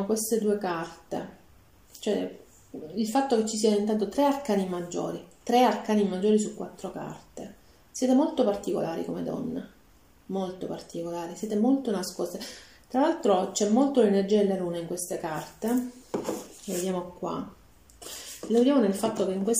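Nothing in the audio points to a technical fault: level, continuity and timing all hold steady throughout.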